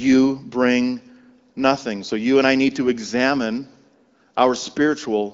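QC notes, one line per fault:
No faults found; the speech comes through the AMR wideband (HD Voice) path with only the light coding character expected at a mid-to-upper rate.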